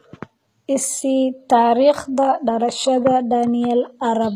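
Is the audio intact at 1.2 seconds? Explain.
No. At 1.23 s there is a single sharp click, likely from dropped samples: roughly one sample is missing, so the waveform jumps abruptly to a later value. Throughout the clip, including that moment, the speech also has gritty, lispy treble from HE-AAC compression. The upper spectrum is rebuilt from copied lower bands, which fits a low bitrate of around 20 kbps.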